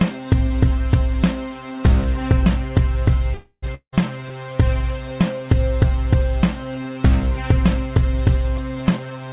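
At 3.34 s a call audio freeze begins, likely from delayed packets. The last sound continues as a fading buzz, then goes silent. At 3.65 s the sound resumes with nothing missing.

At 3.75 s a long network dropout follows, likely from lost packets. A brief fading fill gives way to silence. At 4.02 s the sound returns with about 0.18 s gone.

From 8.97 to 9.28 s a jitter buffer speed-up trims short pitch-period pieces. The sound runs at 148% speed with unchanged pitch and feels hurried. Roughly 0.15 s is cut.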